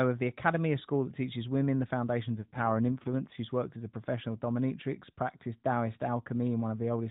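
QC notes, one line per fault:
2.37–3.40 s, AMR rate drop: the link forced the AMR narrowband codec to a lower mode, so fewer bits describe each 20 ms frame and the speech turns rougher and buzzier with the band unchanged and no gap, consistent with a step from 12.2 to 5.9 kbps and back.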